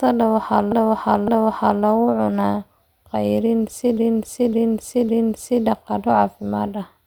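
At 0.72 s a block of about 0.56 s loops, playing twice more until 1.84 s. At 3.97 s the same repeated-frames fault returns, this time three extra passes running to 5.64 s. Each block, consistent with a run of six compressed frames, was written or sent again, so the decoder replays identical material. It sounds like a mechanical stutter, and the speech is stretched by about 1.1 s and 1.7 s respectively.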